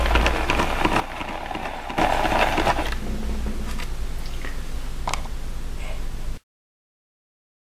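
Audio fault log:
1.00–1.98 s, sudden gain jump: the level drops by about 9 dB in a single step and returns just as abruptly, with the background noise falling and rising along with the sound. The cause is likely a gain setting applied without a ramp. A fade or compressor would glide instead.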